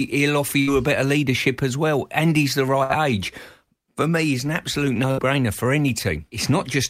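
A brief held sound fading into a gap breaks the speech at 0.61 to 0.70 s after "will offer", at 2.83 to 2.92 s after "he's the", and at 5.11 to 5.20 s after "me he's an absolute". Each is a burst of packet loss: about 60 ms of audio never arrived, so the receiver stretched and faded the last sound before jumping ahead.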